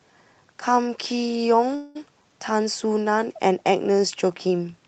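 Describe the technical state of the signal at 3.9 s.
At 3.9 s the speech comes through intact, with no dropout, glitch or other fault at that moment beyond the ordinary character of the call codec path it travels through.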